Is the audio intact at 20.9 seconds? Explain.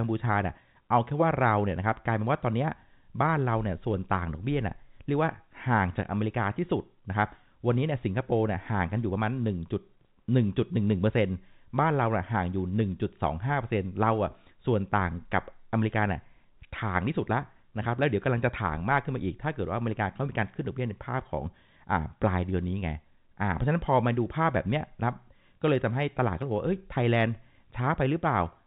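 Yes, the speech at 20.9 seconds is intact, with nothing beyond the narrow telephone band of its G.711 coding to be heard there.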